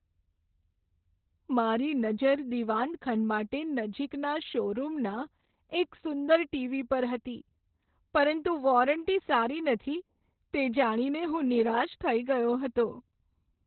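Opus voice compression runs throughout this speech: narrowband SILK coding removes everything above 4.2 kHz and leaves it muffled and hoarse, which fits a bitrate near 8 kbps.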